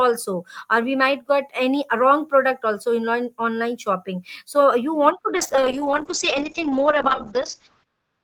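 A call bitrate drop starts at 5.39 s, just after "so you want to", and runs to the end. Starved of bits, the encoder codes the speech coarsely and narrows its bandwidth from 20 kHz to 8 kHz, which fits a fall from 32 to 7 kbps. The speech turns rough and muffled.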